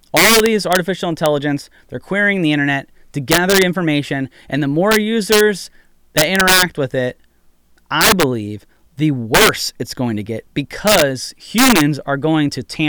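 Throughout the speech, violent cracks burst out on the loudest moments: integer overflow, where gain about 8 dB too high wraps rare peaks to the opposite sign.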